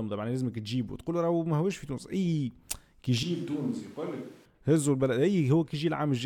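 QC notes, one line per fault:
3.23–4.45 s, switch to a distant microphone: the speech abruptly turns roomy and hollow, loses low-end body and drops about 10 dB, while background noise rises, sitting roughly 30 dB below the speech. The close signal was likely dropped in favour of a farther pickup. On the waveform the envelope steps down with a hard edge at each boundary. On the spectrogram the bass thins out, reverberant smearing blurs word endings, and a raised noise floor fills the gaps.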